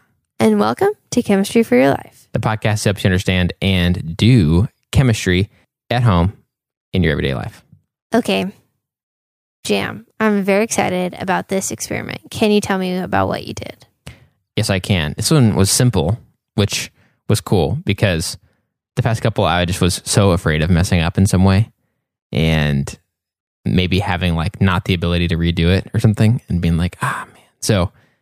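No faults can be heard anywhere in this speech recording.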